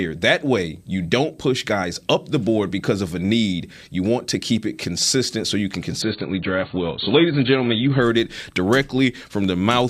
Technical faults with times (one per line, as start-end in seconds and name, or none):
6.02-8.02 adaptive stream at a lower bitrate